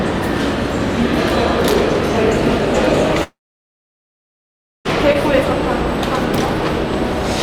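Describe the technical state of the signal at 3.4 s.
At 3.4 s the audio sits inside a long network dropout, lasting from 3.23 to 4.87 s. The last sound trails off into near silence. The lost audio is likely never delivered and not recovered.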